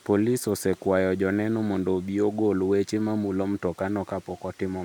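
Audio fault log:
No technical faults can be heard in the speech recording, with the signal holding steady and intact throughout.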